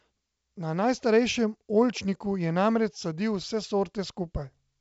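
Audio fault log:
The speech runs over a G.722 wideband telephone path at 64 kbit/s, with audio carried up to about 7 kHz and at most a faint hiss in the upper band from the coding.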